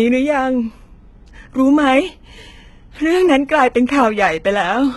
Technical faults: HE-AAC compression

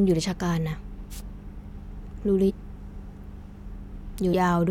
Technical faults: wireless microphone noise hit; damaged data in a compressed stream

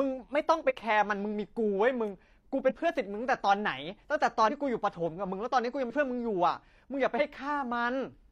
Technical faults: compressed frames skipped

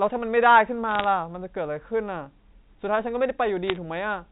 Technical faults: bit errors on a digital phone line

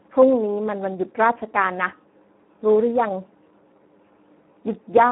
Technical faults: Speex codec

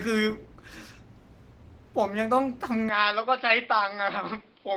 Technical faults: Opus voice compression; input switched to a poorer device

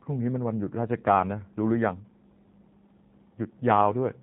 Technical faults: G.729 codec

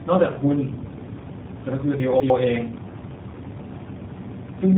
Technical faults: tandem speech coding; chunks out of order

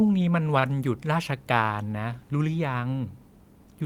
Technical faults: short stall from a late packet

